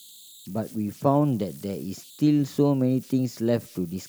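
Converter idle tones run through the whole speech clip. An undithered delta-sigma converter falls into repeating bit patterns, giving a whistle near 4 kHz, about 26 dB below the signal.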